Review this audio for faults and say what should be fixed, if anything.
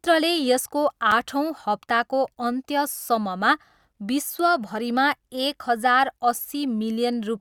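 A short, hard-edged dropout cuts into the speech at 1.11 s, a hole of about 5 ms. It is a gap between stream segments: the timestamps of two 6-second segments fail to meet, and the player fills the missing span with silence. Nothing is lost. Aligning segment timestamps so each segment begins exactly where the previous one ends would prevent it.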